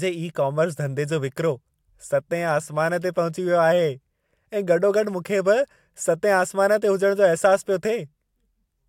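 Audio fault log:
No technical fault can be heard in this speech recording. There is nothing to enter in this log.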